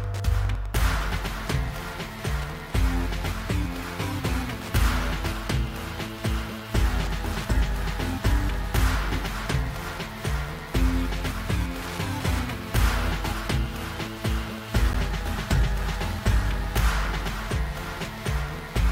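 At 14.93 s the sound drops out for a brief, hard-edged instant of silence, about 13 ms long. This is a gap between stream segments: the timestamps of two adjacent 6-second segments fail to meet, and the player fills the hole with silence rather than losing audio.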